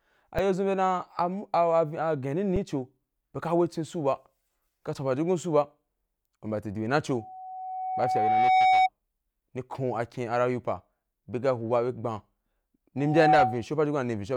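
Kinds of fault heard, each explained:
Underrun with held sample: The output buffer ran dry, and the converter froze on its last value. The waveform goes flat for about 3 ms at 0.38 s and 5 ms (256 samples) at 2.56 s. Audio was lost during each gap.
Loudspeaker feedback squeal: The microphone hears its own loudspeaker, and the loop runs away at 750 Hz. The tone swells over about one and a half seconds from 7.11 s, peaking around 5 dB above the speech. At 12.97 s it builds much faster, reaching about 10 dB above.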